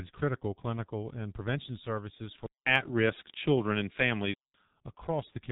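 From the start the whole clip runs through the G.723.1 codec, and it's heavily damaged: nothing above 3.8 kHz, a muffled, hoarse quality and smeared consonants, which fits the roughly 6.3 kbit/s mode with its long 30 ms frames and sluggish voice model.

At 2.46 s there's a 200 ms gap, and then the level shifts by a few dB and a very faint new background noise comes in until 4.54 s. That's likely the input switching to a poorer device and then back.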